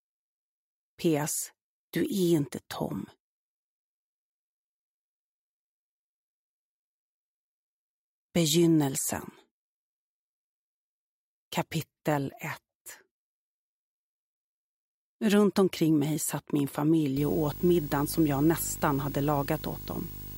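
Video or display buzz from 17.16 to 20.37 s: a coupled screen signal adds a 50 Hz buzz with hash and a 15.6 kHz line tone, about 15 dB under the sound.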